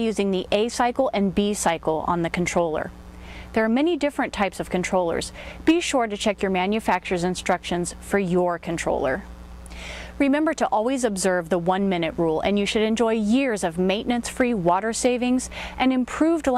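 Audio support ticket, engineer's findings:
Frames out of order, 5.37–5.53 s. Symptom: brief garbled flutter. Two adjacent blocks of about 70 ms each decoded in swapped order, which fits two runs of three codec frames exchanged. Probable component: frame delivery ahead of the decoder, frames arriving out of order. No audio dropped; total duration preserved.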